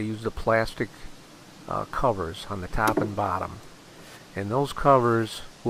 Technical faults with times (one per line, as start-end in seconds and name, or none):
none